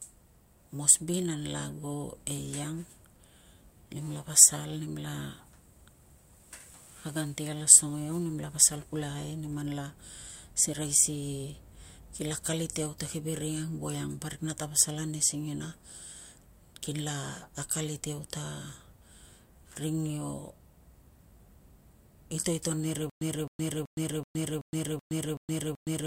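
From 23.10 s to the end, a stutter with silent gaps: a 263 ms fragment repeats eight times, every 379 ms, separated by about 117 ms of digital silence, likely a stalled stream replaying its last buffer.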